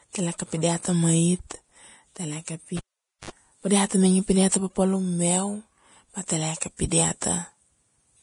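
From the start, the speech has nothing above 10.6 kHz and a smeared, watery quality, the mark of low-bitrate audio saved at a high bitrate. The likely cause is a low-rate Vorbis encode, around 30 kbit/s, later re-saved as a larger MP3 that cannot restore the lost detail.

At 2.77 s a pop marks the cable being pulled and plugged in. The signal drops to near silence for about 0.48 s, then a 57 ms burst of 50 Hz mains buzz as only the tip makes contact, and a second pop at 3.30 s as sound returns just before "pa dia".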